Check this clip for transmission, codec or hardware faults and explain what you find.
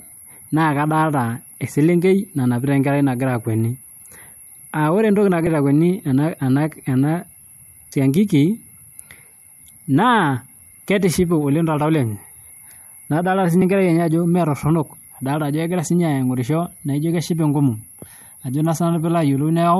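Compressed frames are skipped three times in this speech, at 5.46, 7.92 and 13.61 s. Each time, whole frames, likely about 26 ms long, never play. About two frames are lost at 5.46 and 13.61 s, and about four at 7.92 s. The speech jumps ahead each time, with a short smeared blip rather than a click.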